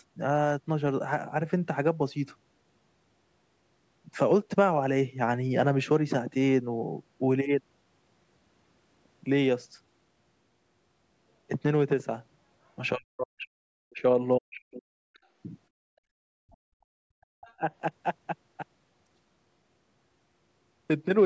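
This is a speech recording with speech suppressed in double talk at 12.95–14.03 s, 14.39–15.0 s, 16.55–16.59 s and 17.01–17.62 s. The talker's voice plunges by a deep margin, around 40 dB, likely because the echo canceller muted everything while both parties spoke. It differs from a network dropout because the dips fall on speech overlap. The other side's voice leaking through shows up as very faint scraps, roughly 35 dB below the talker, at 15.14–15.19 s and 17.47–17.54 s. This is likely uncancelled loudspeaker echo, and it stands apart from crosstalk because it is a second voice coming back through the talker's own device. From 15.75 to 16.27 s the background is gated by the echo canceller: room sound sinks by about 30 dB and then returns. Unlike double-talk suppression, it is the room tone rather than the talker's voice that disappears. The call microphone processing, which removes the lowest bass and leaves nothing above 8 kHz, is working as expected.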